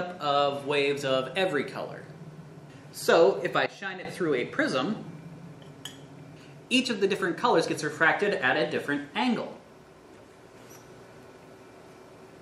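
At 3.66 s the level drops abruptly by about 12 dB and stays down until 4.05 s, where it returns just as suddenly. This is a sudden gain jump: the sound and its background noise fall and recover together, with no fade in either direction. That points to a digital gain change applied from one sample to the next, likely a setting or bit shift switched in and out without any ramp.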